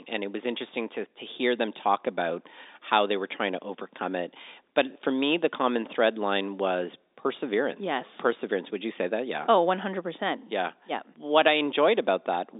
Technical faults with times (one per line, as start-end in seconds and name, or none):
none